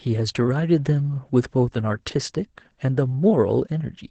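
Throughout, the speech passes through Opus voice compression in its SILK linear-prediction mode, band-limited to wideband with nothing above about 8.8 kHz and its excitation coded coarsely, which fits a rate near 12 kbps. The result sounds plainly muffled, hoarse and faintly robotic.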